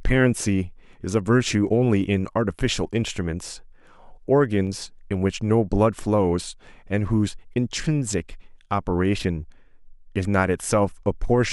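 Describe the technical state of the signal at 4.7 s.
At 4.67 s there is a single sharp click in the speech, and it most likely comes from dropped samples: a tiny run of samples, probably just a handful and well under a millisecond, has gone missing from the stream. The waveform therefore jumps abruptly from one value to a later one instead of moving smoothly, producing a step discontinuity. On a spectrogram it shows as a thin vertical line spanning the frequency range, and no audible stretch of sound is lost.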